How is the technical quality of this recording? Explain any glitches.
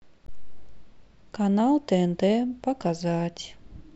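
One glitch mars the recording, early on. From 0.25 to 0.30 s there is damaged data in a compressed stream: a short run of corrupted bytes makes the decoder misread those frames, lose sync and hunt for the next valid frame header. That breaks the speech with a brief chirp or squawk lasting about 50 ms.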